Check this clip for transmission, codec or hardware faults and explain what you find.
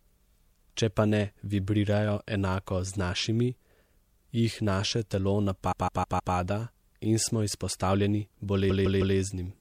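Repeated frames affect the speech twice. A run of compressed data, about 157 ms long and consistent with six short codec frames, was decoded again and again, so each block replays as a stutter. From 5.71 to 6.34 s it plays four extra times, adding 0.63 s. From 8.69 to 9.16 s it plays three extra times, adding 0.47 s.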